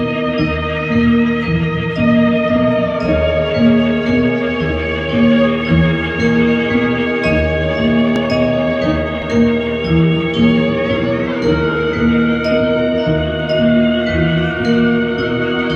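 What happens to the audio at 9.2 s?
At 9.22 s the program likely failed to read its buffer before the hardware overwrote it, a dropped buffer (overrun). About 20 ms of audio is lost and the two sides butt together with no gap, so a sudden jump is heard.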